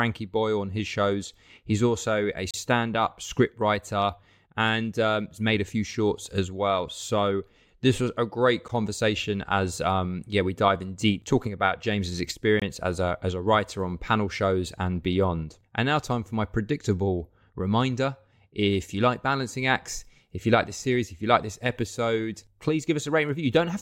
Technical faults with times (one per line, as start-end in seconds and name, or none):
2.51-2.54 block of digital silence
8.68 block of digital silence
12.60-12.62 block of digital silence